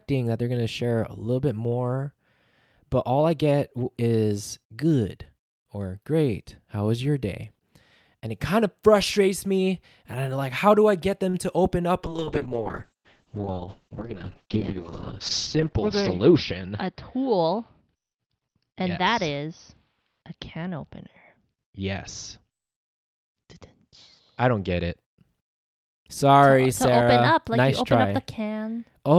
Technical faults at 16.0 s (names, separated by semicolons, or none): call bitrate drop